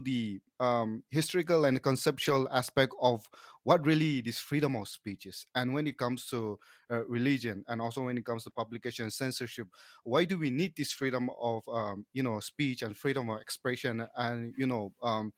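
At 2.25–2.31 s, 4.91–4.97 s (after "really this freedom of"), and 5.91–5.93 s, a lost packet was rebuilt from error correction. The decoder played the low-bitrate copy carried in the next packet, so there is no gap, but about 40, 40 and 20 ms of speech turn rougher and noisier.

At 8.49–8.57 s, after "when it comes to", two adjacent stretches of short concealed packet loss occur, 20 ms each. The receiver extrapolated the preceding sound to fill them, which leaves a brief smear before the real signal resumes.

At 10.89–11.03 s, after "do we need this", a longer error-correction rebuild covers about 80 ms with the same coarse, noisy texture.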